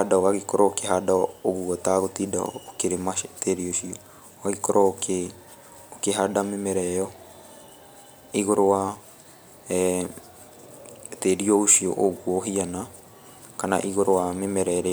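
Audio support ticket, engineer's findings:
No audible faults found on listening; no action needed.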